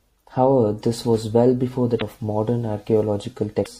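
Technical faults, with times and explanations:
Throughout, MP3 compression: the speech has a plainly audible watery, swirly quality, likely from an MP3 encode at around 64 kbps. At that rate the encoder runs short of bits, so it chops off the top end at a fixed frequency and drops quieter frequency lines, which then flicker in and out between frames. That flicker is the swirl you hear, and sibilants come out metallic and chirpy while the sharper onsets lose their edge.
1.98–2.02 s and 3.62–3.67 s, damaged data in a compressed stream: two short glitches, each about 40–50 ms, heard as a quick chirp or blip that breaks the flow. Here part of the compressed stream was corrupted, so the decoder couldn't read those frames properly, lost its place and had to hunt for the next valid frame header. That resync is what gives the break in the sound.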